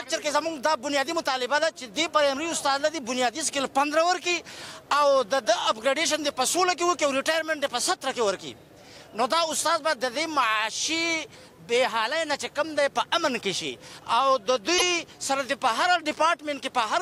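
The audio has one brief defect from 14.77 to 14.82 s, about 44 ms, where it jumps ahead and the next moment comes out garbled. This is most likely a broken MP3 bit reservoir: frames were lost, and the following frames, which borrow data stored earlier, decoded wrong bytes. The length fits one or two frames of about 26 ms. On a spectrogram it appears as a narrow vertical smear or gap with a hard edge, and the waveform shows a discontinuity.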